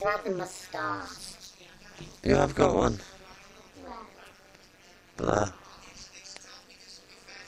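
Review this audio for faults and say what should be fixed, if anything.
Overlap-add ripple runs throughout: the level dips by about 60 dB and recovers roughly 200 times a second, a harsh metallic buzz at the frame rate. Unlike hum near that frequency, it modulates the sound itself rather than adding a tone, so it disappears in silence. To prevent it, choose window shapes and a hop size whose overlapped windows sum to a constant gain.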